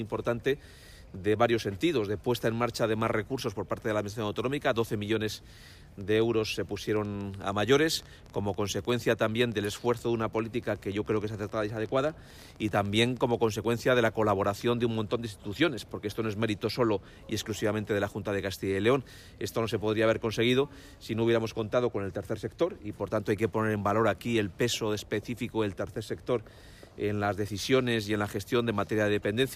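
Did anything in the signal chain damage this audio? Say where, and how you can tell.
Yes: a train of clicks from 6.01 to 13.65 s, about 10 per second and unevenly spaced, at roughly signal level. Their matching shapes, unlike random crackle, suggest likely interference in the analogue wiring.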